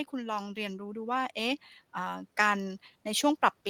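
From 0.11 s to the end, automatic gain rising: the AGC judged the input too quiet and kept lifting gain, so speech and background swell together.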